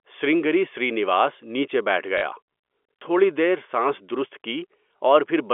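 Packets went missing and the receiver filled the gaps by replaying the last one it had, a case of packet loss with last packet repeated. At 2.18 to 2.22 s, just after "سرنگری سرینواس نیچے بیٹھ", about 40 ms is patched this way, which fits two 20 ms packets. The sound stutters with a brief robotic buzz. A shorter blip comes near 4.99 s. The sound sits in the narrow G.711 telephone band.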